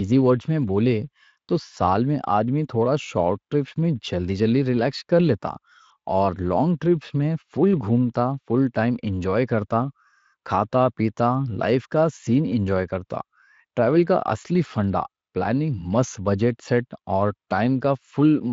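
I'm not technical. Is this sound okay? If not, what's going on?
Yes, nothing in this speech clip needs attention, and the Speex voice-chat codec it passed through is working as it should.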